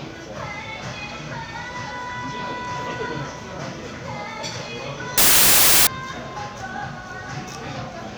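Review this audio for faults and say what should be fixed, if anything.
From 5.18 to 5.87 s the sound turns into loud broadband hiss: samples built from the wrong bytes, because the bytes of each sample are put together wrongly. Unlike clipping or dropouts, the noise bears little resemblance to the original sound. To prevent it, check byte order and alignment where the stream is read.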